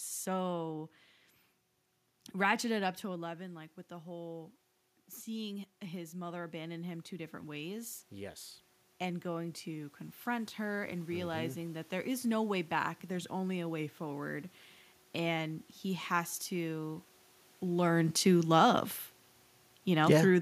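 Just after "ratcheted up", at 3.04 s, the level falls by about 10 dB as the talker moves back from the microphone, and the automatic gain rising fault follows. The gain control treats the quieter input as a level to correct and raises its gain by about 11 dB, slowly, until 11.95 s, just before "is no way back". Voice and room noise swell together over those nine seconds, the background becoming louder as the gain climbs.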